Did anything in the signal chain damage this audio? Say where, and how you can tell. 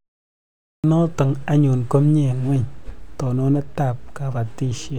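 Yes: a clipped start after a pause. At 0.37 s, speech snaps in abruptly with 0.47 s swallowed before "notok anyun ko mie", while the playback device woke from sleep.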